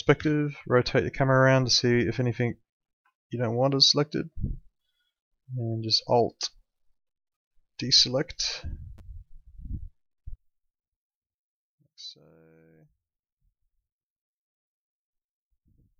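From about 10.36 s to the end, the centre of the sound drops out and what's left sits about 23 dB lower, a faint copy. That's the one channel inverted signature: one side likely flipped in polarity, so the shared content cancels when summed to mono.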